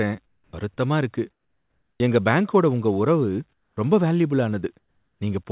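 Speech. Comfort noise in place of the background at 0.26–0.53, 1.31–2.0, 3.53–3.77 and 4.79–5.21 s: the background becomes steady, featureless hiss, about 7–12 dB quieter, likely from discontinuous transmission during pauses. Onset clipped by the voice detector at 0.51–0.53, 1.98–2.0 and 3.75–3.77 s: speech returns abruptly, its first 20 ms missing, likely because voice detection triggered late. Nothing above 4 kHz comes through, consistent with a narrowband call codec.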